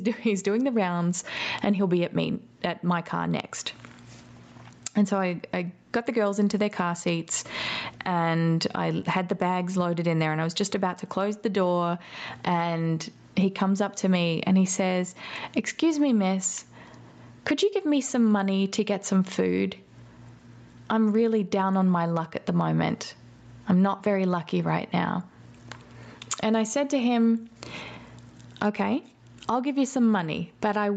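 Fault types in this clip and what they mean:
gain pumping: The gain is pulled down on each loud syllable, a swing of roughly 25 dB, likely from input gain set far too high with a fast limiter clamping it.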